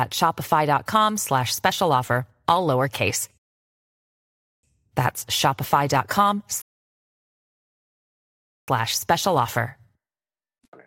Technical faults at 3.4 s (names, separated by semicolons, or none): rebuffering stall